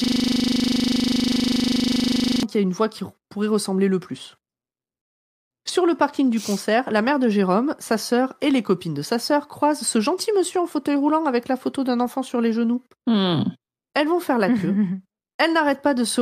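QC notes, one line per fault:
0.00–2.43 s, system hang loop: already under way when the clip opens, a single 40 ms slice of speech repeats exactly about 60 times, so it fuses into a steady 25 Hz buzz rather than a stutter. The playback side froze while the hardware kept cycling one ring buffer, consistent with a 40 ms buffer. Unlike a dropout or codec glitch, the repeats are identical and strictly periodic. Normal speech resumes with "qui a une voix".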